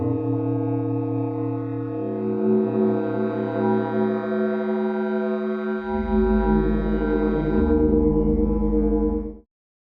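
Music, no technical faults heard.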